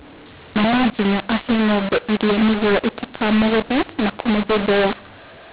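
Speech coded as G.711 mu-law at 8 kHz was decoded as A-law throughout, a case of mu-law and A-law mixed up. Each 8-bit code maps to the wrong level, so the speech sounds harsh and distorted while pauses fill with noise instead of silence.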